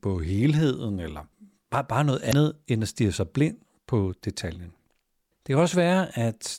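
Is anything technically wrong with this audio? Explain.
Yes. From 2.29 to 2.33 s, between "eller bare bare noget" and "end at stige sig", damaged data in the compressed stream makes the decoder misread frames and lose sync until the next header, giving a 44 ms glitch. On a spectrogram it shows as a brief disruption, and in the waveform as a discontinuity.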